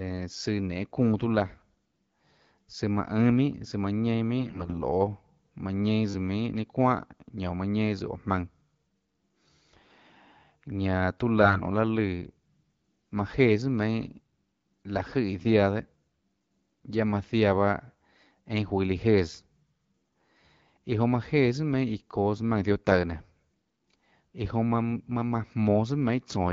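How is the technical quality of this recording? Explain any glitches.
The recording has two short patches of corrupted speech and one brief click, heard over the light coding of an AMR wideband link at 12.65 kbit/s.

AMR bit errors at 4.39 to 4.77 s and 11.42 to 11.61 s: flipped low-priority bits scramble excitation pulses and fine parameters, making the speech hoarse and gargly. The first burst, with about one bit in ten wrong, is harsher.

A repeated buffer at 22.91 s: new audio arrived late, so the last short block replayed once, a length that fits a 10 ms buffer, producing a small click.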